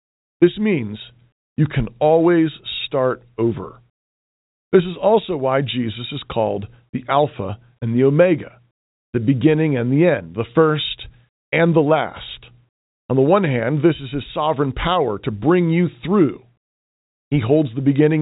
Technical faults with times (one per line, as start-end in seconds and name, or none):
none